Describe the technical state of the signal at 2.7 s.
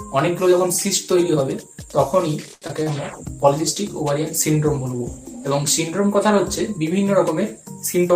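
A short concealed packet loss covers 2.68 to 2.80 s. About 20 ms of audio never reached the decoder in time, and the receiver bridged the gap with roughly 12 ms of synthesised continuation before blending back into the real signal. The concealment extends the last sound, following its pitch where it was tonal and shaping noise where it was not. This leaves a brief smear or wobble, and a very short sound can drop out entirely.

Just before it, a short stall from a late packet runs from 2.53 to 2.64 s. A packet arrived late, the jitter buffer emptied, and the receiver held the last sound for about 82 ms until the packet came in, then resumed from the same point. Nothing is lost, but playback now runs about 82 ms later than before. The held stretch sounds drawn out, with a faint buzz or dip, and leads almost straight into the loss.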